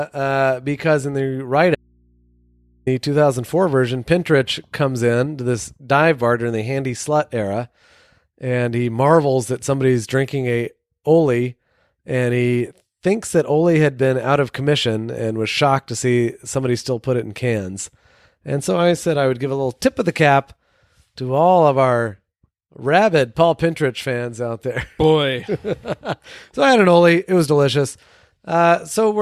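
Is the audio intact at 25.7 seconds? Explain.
Yes, the audio is intact at 25.7 seconds, with no dropout, glitch or other fault heard at that point.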